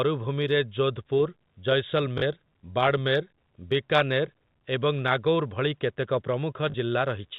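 At 2.18 s and again at 6.7 s there's packet loss with the last packet repeated: about 40 ms each time, likely two 20 ms packets, giving a brief, robotic stutter.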